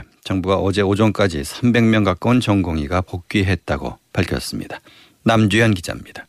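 No technical faults can be heard anywhere in the speech. Nothing in the audio points to a problem in how it was captured, processed or delivered.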